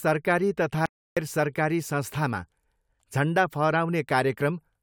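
At 0.86 s the speech cuts out abruptly and stays silent until 1.17 s, a gap of about 310 ms, before resuming mid-flow. This is an audio dropout to silence: no room tone or noise floor survives inside the gap. The input signal was likely lost briefly, through a momentary disconnect, link failure or mute, while recording continued. Whatever was spoken during that span is unrecoverable.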